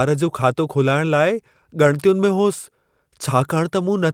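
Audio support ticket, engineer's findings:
Engineer's findings: no audio faults found in the speech clip.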